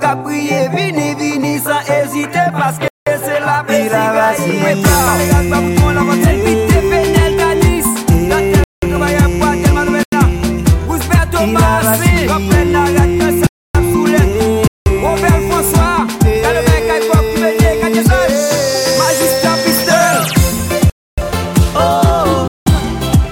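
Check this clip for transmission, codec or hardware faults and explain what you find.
Seven dropouts break the audio, each a block of digital silence: the sound snaps to dead silence and back, at 2.88–3.07, 8.64–8.82, 10.03–10.12, 13.47–13.75, 14.68–14.86, 20.90–21.18 and 22.48–22.66 s. Most holes last about 186 ms, one 93 ms and two 279 ms, whole multiples of a 4096-sample unit at 44.1 kHz. That fits the program failing to refill its output buffer in time, leaving zeros.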